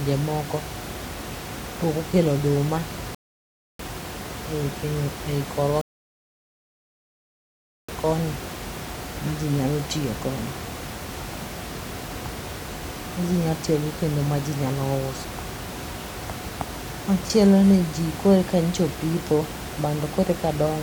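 A rebuffering stall at 3.15 s cuts the speech to silence for about 0.65 s, and a second, longer one at 5.81 s holds for about 2.07 s before playback picks up at 7.89 s. In both, the player drained its downloaded audio and paused until more data arrived, then resumed at the exact point it stopped. No speech is lost; the gaps simply add time, with the room noise, about 11 dB below the speech, dropping out along with everything else.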